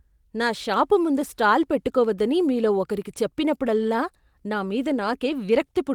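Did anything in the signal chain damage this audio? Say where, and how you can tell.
No, nothing in this speech's signal chain shows damage. The Opus voice compression is working as intended, running in its hybrid fullband mode with content reaching up to about 20 kHz and only a light coding texture, which fits a rate around 24 kbps.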